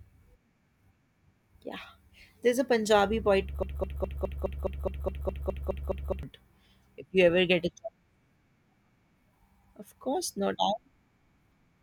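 A speech clip with a broken-record loop from 3.63 to 6.23 s: a 0.21-second fragment repeats back to back 13 times, and whatever should have played there is gone. Most likely the player or stream stalled and kept re-sending its last buffered chunk.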